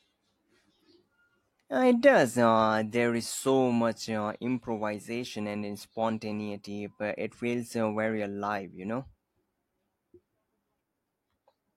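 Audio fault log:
No audible technical fault: the speech signal keeps a steady level, continuous timing and an intact frequency range across the whole clip.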